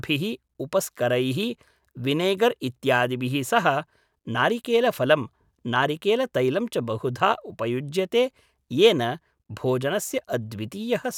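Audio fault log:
No technical faults are audible anywhere in the speech; the signal stays steady and intact throughout.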